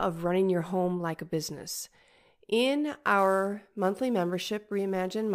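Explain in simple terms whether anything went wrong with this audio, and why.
Sample clock jitter from 3.19 s to the end: the recorder's timing wobbles by a few millionths of a second, adding a faint hiss that grows on louder, brighter speech.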